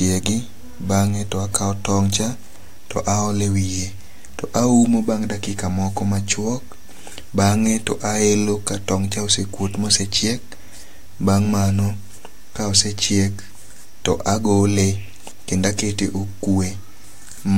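Nothing goes wrong anywhere in this bit of speech, so there's no technical fault to point out at any moment.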